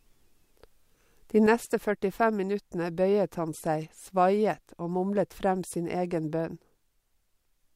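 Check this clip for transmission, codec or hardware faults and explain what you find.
One fault stands out. From 1.47 s to the end, the speech drops abruptly by about 6 dB, the signature of one channel dropping out: one stereo side has likely been lost, so the mono sum halves. Unlike a gain fault, the drop is a clean step with no ramp.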